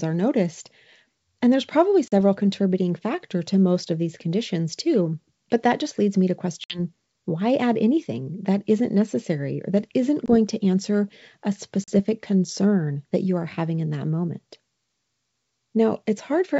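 Packet loss on an ADPCM call cuts hard-edged silent holes at 2.08 s (40 ms), 6.64 s (60 ms, after "just leads me to"), 10.26 s (20 ms) and 11.84 s (40 ms, after "to answer a"). Each gap throws the G.722 decoder's adaptive predictor and step size out of step with the sender's, so the speech returns slightly distorted before settling.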